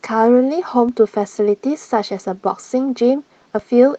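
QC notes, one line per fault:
0.89 to 3.59 s, DC step: the waveform's zero line jumps off centre at 0.89 s, holds there, then steps back at 3.59 s. Each abrupt offset change is a low thump or click. The speech runs on unchanged across both.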